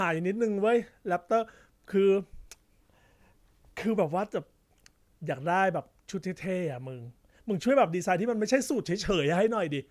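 No technical faults can be heard anywhere in this recording.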